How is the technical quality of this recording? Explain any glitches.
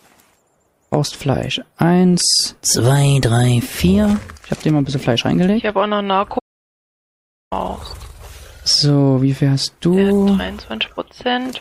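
One glitch stands out. From 6.39 s to 7.52 s there is an audio dropout to silence. The sound cuts off mid-flow and returns after about 1.1 s. The gap is silent, with no room tone. The likely cause is a lost input, with recording continuing regardless. Whatever sounded then is gone.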